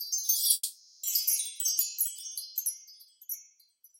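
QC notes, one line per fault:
0.53–1.05 s, long network dropout: at 0.53 s the sound stops progressing and the last moment is stretched into a buzzy, hiss-like continuation that fades over about half a second, followed by roughly 30 ms of near-silence. At 1.05 s the audio resumes with about 500 ms of material missing. This is likely a loss of incoming packets, with the receiver's concealment synthesising the fading fill until real audio returned.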